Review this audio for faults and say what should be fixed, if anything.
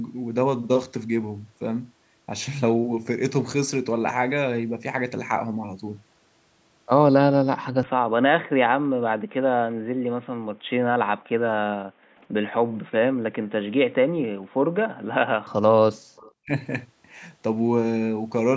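From 7.83 to 15.47 s the speech turns duller and narrower in band, compared with the 8 kHz band of the surrounding call audio. The level drops by about 5 dB, and a new noise floor appears roughly 35 dB below the speech, with no gap at either transition. The likely cause is an input switched to a poorer device, such as a headset falling back to its call profile. Pinning the input device and disabling automatic device switching prevents this.

Background gating by the echo canceller occurs at 8.8–10.69 s, 11.78–13.52 s, 14.26–15.12 s and 15.98–16.16 s. During each span, the room sound between phrases drops by as much as 40 dB and then returns, because the canceller clamps the microphone whenever far-end audio plays. Gentler suppression or comfort-noise insertion during playback prevents this.

Echo leak appears at 12.19–12.23 s and 16.16–16.32 s as a faint delayed copy of the speech, trailing by 265 ms at about 40 dB and then about 30 dB below the direct signal. 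This is likely residual loudspeaker pickup that the far side's echo canceller failed to remove. Using headphones or better echo cancellation on that end prevents it.

Speech suppressed in double talk shows up at 16.45–16.51 s as a brief dip of roughly 25 dB lasting about 70 ms. The likely cause is the canceller treating overlapping talk as echo and attenuating the near-end voice. Tuning the double-talk detector, or using headsets, prevents it.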